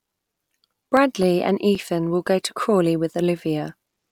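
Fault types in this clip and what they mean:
CD scratch ticks: a blemish on the disc wipes out more data than error correction can rebuild, once per revolution, so the player patches or mutes those samples. Here you get six short ticks from 0.97 to 2.27 s, each only a few milliseconds long.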